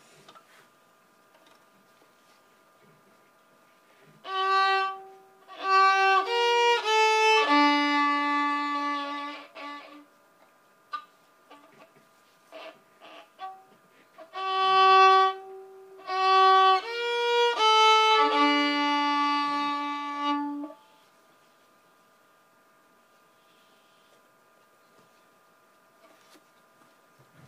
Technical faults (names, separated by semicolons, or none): none